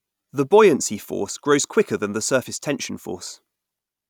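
Nothing goes wrong anywhere in this speech clip, so there are no technical faults to walk through here.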